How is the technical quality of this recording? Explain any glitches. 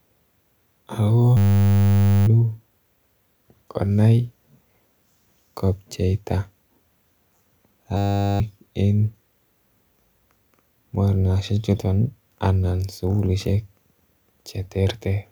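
Two system hang loops interrupt the speech: 1.37–2.27 s and 7.97–8.40 s. The computer or driver froze while hardware replayed a 10 ms buffer, giving a steady 100 Hz buzz. About a second, then roughly 0.4 s, goes missing.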